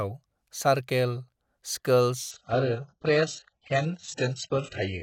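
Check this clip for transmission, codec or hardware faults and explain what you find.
There's one fault here. At 2.31 s the speech drops to an adaptive stream at a lower bitrate and stays there to the end. The player switched down mid-stream, probably because the connection slowed. The quality changes abruptly with no gap: the treble vanishes, with nothing above 8 kHz. That sound fits a jump from roughly 96 kbit/s AAC-LC to an 8 kbit/s HE-AAC rendition.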